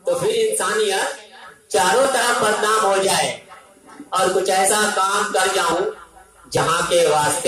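Small forward jumps in the sound occur at 1.02, 2.05, 3.54, 4.69, 5.72 and 6.57 s, each skipping a few hundredths of a second. They are likely a dropped buffer (overrun), where samples were overwritten before being read and the edges joined without a gap.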